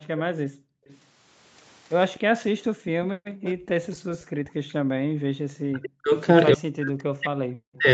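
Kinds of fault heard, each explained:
Background gated by the echo canceller: at 0.0–0.88 s, 2.63–4.0 s and 5.11–5.3 s, the room sound falls away by up to about 40 dB and then returns. The canceller clamps the microphone while its loudspeaker plays, briefly at first, then for most of a second.
Echo leak: from 0.17 to 0.97 s and 3.43 to 4.24 s, a faint copy of the speech trails 253 ms behind, sitting around 20 dB down. Likely the canceller missed part of the loudspeaker sound its microphone picked up, and that remnant was sent back.
Speech suppressed in double talk: the speech dips by as much as about 40 dB for roughly a tenth of a second at 0.41–0.52 s, and again from 4.28 s to the end. Likely both sides overlapped, and the canceller attenuated the talker along with the echo.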